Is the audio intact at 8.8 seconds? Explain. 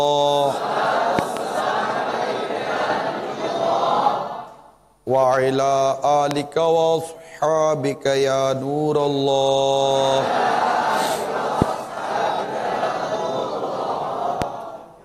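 Yes, the audio is intact at 8.8 seconds, with no dropout, click, distortion or other fault at that point.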